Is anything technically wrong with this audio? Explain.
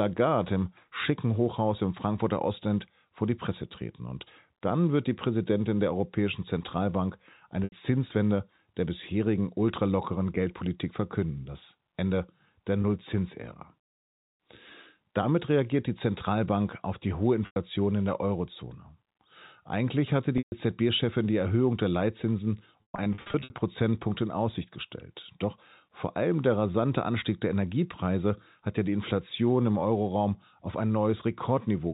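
Yes. Packet loss with pitch repetition occurs at 7.64–7.72 s, 12.82–12.84 s, 17.46–17.56 s (between "auf die hohe" and "in der"), 20.38–20.52 s, and 22.82–23.50 s. The receiver bridges each gap by repeating the last pitch period, so the 20 ms loss sounds like a slight buzzy hold. The 80 to 140 ms gaps fade toward silence before speech cross-fades back. The final stretch has losses scattered over 680 ms, with runs up to 120 ms, which points to about eighteen 20 ms packets missing.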